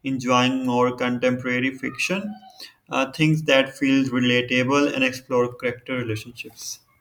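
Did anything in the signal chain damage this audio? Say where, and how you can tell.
No, nothing in the signal chain has damaged this speech recording. No stage, from capture through to playback, leaves a mark that can be heard here.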